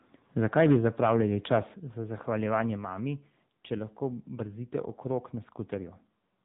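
From start to finish the speech passes through the AMR narrowband mobile codec. Nothing above about 3.8 kHz survives, so the sound is thin and boxy. The damage is plainly audible: the vocal-tract model, excited by a few pulses per 5 ms subframe, leaves the speech buzzy and synthetic, which fits the 7.95 kbps AMR-NB mode. A spectrogram shows a hard ceiling at 3.8 kHz with empty space above it, and smeared harmonics below.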